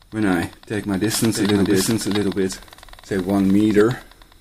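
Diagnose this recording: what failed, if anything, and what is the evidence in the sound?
A second copy of the audio was likely mixed in, either by a slower parallel capture path or by an edit holding two copies out of step. The result is a doubled audio track from 1.35 to 3.81 s: a full-band copy roughly as loud as the original, trailing about 0.7 s behind, with no decay or room colour, starting and stopping abruptly.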